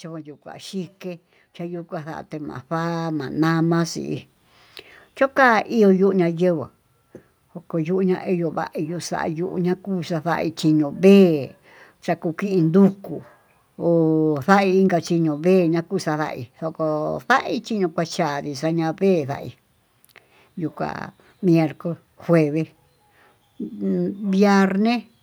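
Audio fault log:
0.43–3.64 s, automatic gain rising: the AGC judged the input too quiet and ramped gain up about 13 dB, lifting speech and background together.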